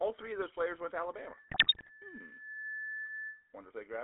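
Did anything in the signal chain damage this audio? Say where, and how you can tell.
Yes. A buzzy, gravelly roughness runs through the whole clip, confined to roughly 300 Hz to 3.7 kHz. This fits a 13 kbps GSM full-rate codec, whose pulse-driven vocal-tract model strips detail.

From 1.13 s to 3.56 s a single 1.7 kHz tone swells over about a second and a half to roughly speech level. This is loudspeaker feedback squeal from a microphone re-amplifying its own loudspeaker.

Between 1.48 s and 1.91 s the speech breaks into squawks and gargling. These are GSM bit errors on the network link, with about 5% of bits flipped, corrupting the decoder's filter, pitch and gain values.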